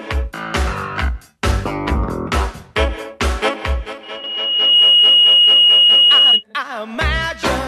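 At 4.03 s a microphone starts picking up the loudspeaker it feeds, and at one frequency the loop gain climbs past unity. That loudspeaker feedback squeal grows by itself as a single tone near 2.9 kHz, swelling over roughly a second until it sits around 10 dB above the rest of the sound. It holds there as a piercing whistle until it stops at 6.44 s.

At 4.24 s, just as the squeal is building, a run of compressed frames is skipped. Those frames never reach the output, either missing from the stream or rejected by the decoder as corrupt. The audio lurches forward by about 150 ms, across roughly seven frames of about 26 ms each.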